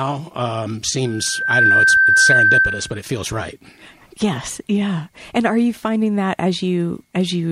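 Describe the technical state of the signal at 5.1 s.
At 5.1 s the speech signal is intact, with no audible fault at that moment.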